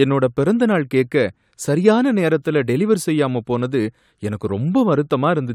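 Nothing goes wrong anywhere in this speech recording; there are no technical faults to point to at any moment.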